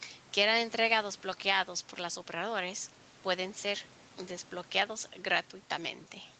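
Nothing in this speech clip stands out as a fault, and the top end stopping at about 8 kHz is just what you'd expect from a call codec running in wideband mode.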